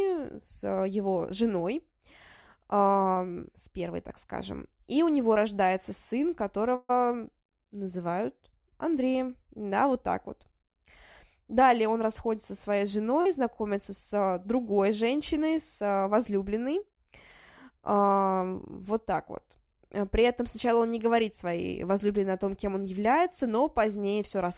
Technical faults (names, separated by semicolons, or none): short concealed packet loss; burst of packet loss